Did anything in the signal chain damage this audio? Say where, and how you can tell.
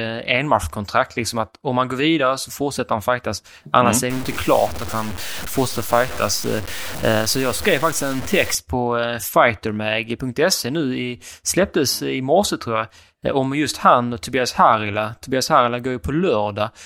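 Yes. Low bit depth without dither runs from 4.1 to 8.55 s, ending just before "på eh". The speech there turns grainy, with roughly 15 dB of signal-following distortion, and quiet syllables sputter or drop out. The likely cause is a sample-format conversion that truncated to a very short word length, around 5 bits by the sound of it, with no dither. The rounding error then tracks the waveform instead of forming a steady hiss.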